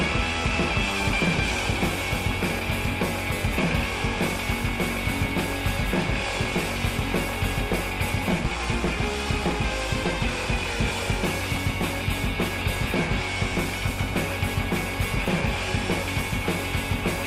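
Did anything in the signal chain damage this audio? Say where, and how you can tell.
Yes. The codec stage, or storage of the encoded file, dropped compressed frames at 8.45 s and 12.61 s. At each point the audio jumps ahead. The jumps are multiples of a 10 ms frame: roughly 50 ms is lost at 8.45 s and about 20 ms at 12.61 s. The frames were missing or rejected by the decoder as damaged.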